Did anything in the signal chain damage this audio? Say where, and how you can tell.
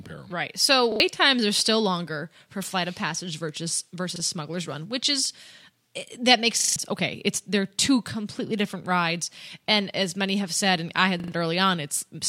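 Yes: a repeated buffer at the driver or buffer stage. Stutters at 0.92–1.0 s (before "times are still longer"), 4.16–4.2 s, 6.6–6.76 s (after "that makes") and 11.2–11.32 s (after "said and I had"). The waveform shows identical 40 ms blocks with hard joins, and the spectrogram shows vertical edges at each join. This fits a 40 ms buffer being replayed whenever new audio arrived late.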